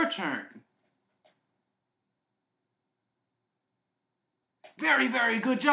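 No technical faults are audible anywhere in this recording.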